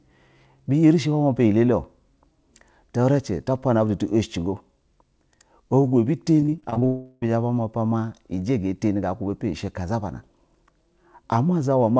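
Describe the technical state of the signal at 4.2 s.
At 4.2 s the speech is intact with no dropout, glitch or distortion, and it carries the wideband character of a G.722 call path, with nothing heard above 8 kHz.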